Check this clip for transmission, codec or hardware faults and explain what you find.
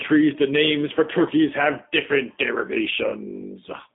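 One codec fault runs through the whole clip: the speech has passed through a G.729 codec. The band stops at about 200 Hz and 3.6 kHz, and the buzzy, slightly synthetic roughness, which plain telephone band-limiting would not add, points to low-rate predictive coding, consistent with 8 kbit/s G.729A. The speech is rebuilt each 10 ms from a vocal tract filter, a pitch predictor and a handful of pulses, so its fine detail is plainly smeared.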